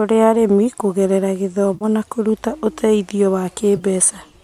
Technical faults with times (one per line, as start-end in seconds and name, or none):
1.74-1.85 AAC frame loss with concealment
3.77-3.83 AAC frame loss with concealment